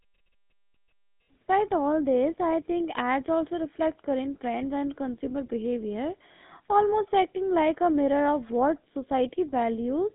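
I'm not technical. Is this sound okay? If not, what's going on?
No. The GSM full-rate codec is audible throughout the speech. This early mobile-phone coding rebuilds the voice from a simplified model driven by coarse pulses, so speech sounds buzzy and gravelly, and nothing above about 3.8 kHz survives, leaving it muffled.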